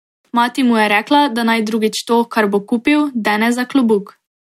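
At 3.93 s a single sharp click is heard, likely from dropped samples: a couple of samples missing, so the waveform jumps abruptly between values.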